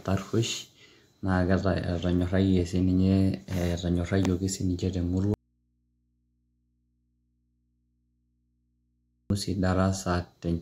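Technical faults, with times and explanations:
5.34–9.30 s, audio dropout to a faint residue: the speech cuts abruptly to faint mains hum about 45 dB down, likely the signal lost while the path stayed live.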